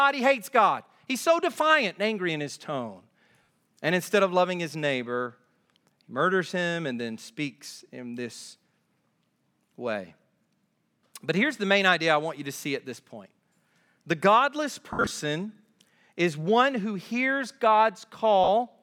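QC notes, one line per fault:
3.43 to 18.48 s, lost LE Audio frames: three dropouts at 3.43 s just after "angry in his tone" (60 ms), 14.93 to 15.11 s just after "the godless" (130 ms scattered over 180 ms, longest run around 70 ms), and 18.44 s (40 ms). The LC3 decoder fills each gap by repeating the last spectrum with scrambled phase, so the speech smears into a brief noisy buzz that fades over the longer runs.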